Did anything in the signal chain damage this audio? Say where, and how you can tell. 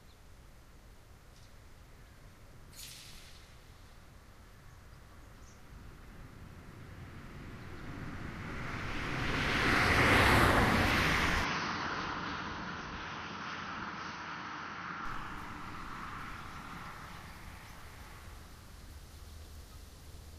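Yes. From 11.45 s to 15.05 s the sound turns dull and boxy, with nothing above 6.3 kHz, and a new background noise floor sits roughly 40 dB below the signal. The change happens with no gap at either boundary and no clear jump in loudness, and full bandwidth returns at 15.05 s. The likely cause is that the input switched to a poorer device at the driver stage, a narrower-band microphone or headset path with its own tone and noise, then switched back.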